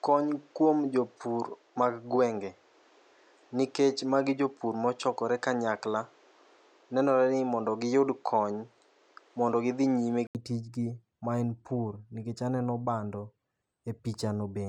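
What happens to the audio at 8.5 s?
At 8.5 s the speech is still on what is likely a poorer input device, a span running from the start to 10.35 s. The sound is dull with nothing above 8.3 kHz, a noise floor about 35 dB below the speech, and a level about 5 dB off. An 80 ms silence at 10.35 s marks the switch back, just before "tijni maen pur nikech".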